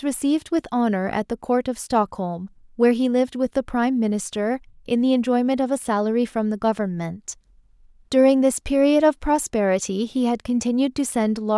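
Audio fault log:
No faults are detected anywhere in the speech recording.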